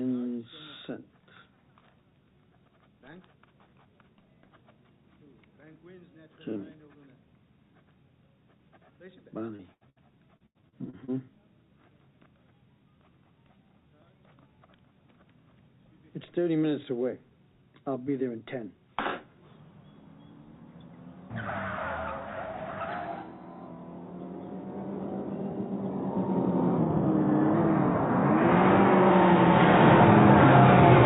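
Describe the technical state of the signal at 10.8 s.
Repeated packet loss (robotic sound) covers 10.8 s, within a stretch from 10.37 to 11.11 s. Packets went missing or arrived too late about half a dozen times in quick succession, the longest hole 86 ms, and each gap was patched by extending the preceding sound, so roughly a third of the span is concealment. The audio turns choppy, with fragments dropping out, heard through a band that stops at 4 kHz, consistent with a G.711 telephone codec.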